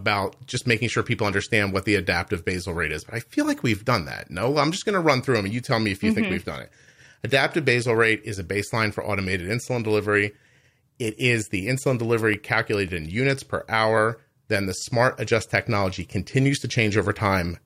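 At 12.34 s there's a block of digital silence, just 0.33 ms of zeros, which fits a 16-sample gap. It cuts in and out with no fade, so it's heard as a single tick.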